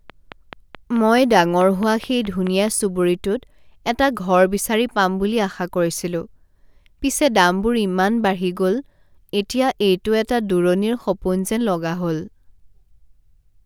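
From 0.10 s to 2.69 s the speech carries a train of clicks: short, near-identical pulses arriving at a steady 4.65 per second, around fifteen in all. Each peaks a little above the speech level, so they register as a regular ticking laid over the talker and remain audible in the gaps between phrases. Repetitive pulses of matching shape like this most likely come from electrical interference from nearby equipment or a faulty connection or power supply.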